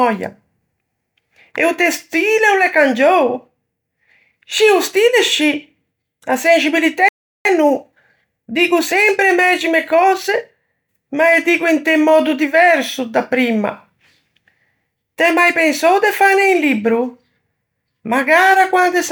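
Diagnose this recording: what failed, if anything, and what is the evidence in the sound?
The speech drops to silence at 7.09 s and resumes at 7.45 s, a gap of about 0.37 s. This is a playback stall, likely the player's buffer running empty or its thread being blocked. The output simply goes silent until the player recovers.

From 7.45 to 10.45 s the speech runs about 1.1 times faster at unchanged pitch. This is time-compressed catch-up at the playback stage: the player trims its backlog by cutting short slices and cross-fading the joins. A simple speed-up would raise the pitch.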